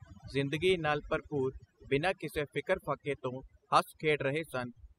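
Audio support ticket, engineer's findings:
Overdone noise removal across the whole speech clip. Background dropped, twinkling specks left behind. Noise reducer set too aggressive: bands near its noise estimate pushed down or out, quiet speech components stripped with them.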